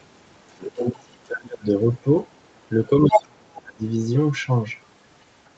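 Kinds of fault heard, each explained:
Other side's voice leaking through: a second, separate voice, likely loudspeaker echo the canceller missed, sits well below the talker at 0.5–0.72 s but slightly louder at 3.11–3.23 s.
Speech suppressed in double talk: the talker fades by around 30 dB at 0.74–1.65 s and 3.01–3.84 s, likely ducked during overlap.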